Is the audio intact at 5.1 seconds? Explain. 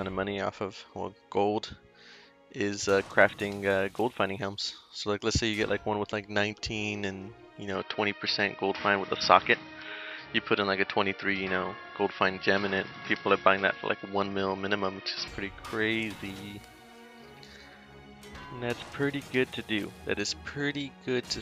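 Yes, the audio is intact at 5.1 seconds, with no dropout, click, distortion or other fault audible at that point.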